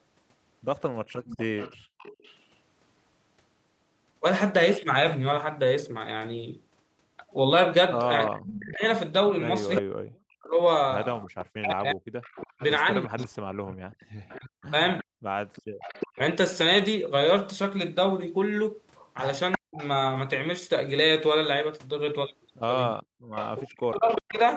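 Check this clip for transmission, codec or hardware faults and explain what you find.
Three echo-canceller problems show up in this speech clip, all consistent with a speakerphone on one side of the call.

Echo leak, at 1.08–2.37 s, 9.75–19.87 s and 23.35–24.39 s: a copy trails about 358 ms behind, likely from residual echo slipping past the canceller. It sits about 20 dB down early, then about 10 dB.

Background gated by the echo canceller, at 1.12–1.98 s, 15.04–15.79 s and 23.03–23.29 s: the canceller clamps the mic while the loudspeaker plays, so the room tone briefly drops about 40 dB, then returns.

Speech suppressed in double talk, at 8.28–16.19 s, 19.57–19.82 s and 23.57–24.38 s: with both sides talking, the voice dips up to about 40 dB in chunks. That's likely the canceller mistaking the talker for echo.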